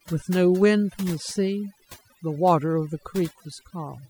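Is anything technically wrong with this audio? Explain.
Yes, there's overdone noise removal running through the whole clip. The noise reduction was pushed too hard, so individual frequency bands near its noise estimate get pulled way down or cut, taking quieter bits of speech with them. You get near-silent gaps with twinkly specks.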